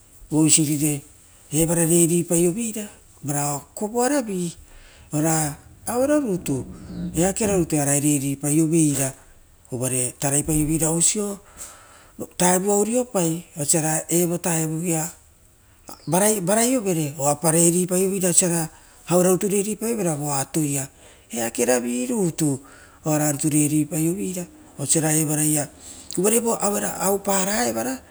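No technical faults are audible.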